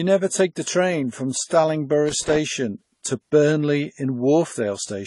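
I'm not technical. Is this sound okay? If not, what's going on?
No. Throughout the clip the speech sounds dull and smeared, with nothing above about 11.3 kHz. That is most likely transcoding between lossy codecs: the recording was squeezed by one compression format and then squeezed again into MP3. Each format leaves its own kind of damage, so you hear two sorts of blur layered together. A single compression pass would give only one of them.

There is also loose connector crackle from 2.09 to 2.37 s, a short, irregular burst of scratching. A worn or dirty plug or socket keeps making and breaking contact as it moves, chopping the sound on and off. Unlike steady hiss or the compression blur, it comes only in that brief moment and its rhythm is uneven.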